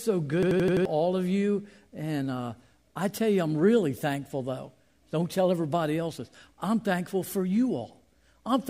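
From 0.43 to 0.85 s, just before "of you", a system hang loop repeats one 85 ms chunk five times at 11.7 Hz, a machine-gun stutter suggesting a 4096-sample buffer.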